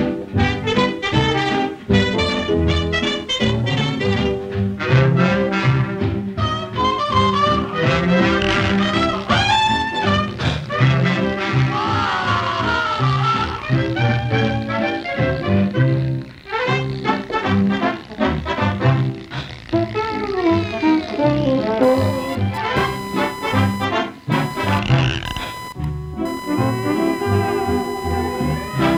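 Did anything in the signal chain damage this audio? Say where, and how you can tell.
Yes, in the analogue wiring: computer activity noise. Load swings in the computer disturb the ground shared with the audio circuit. From 21.83 s to the end, a buzzy chirp pulsing near 1 kHz appears, roughly 15 dB below the signal, following machine activity rather than the sound.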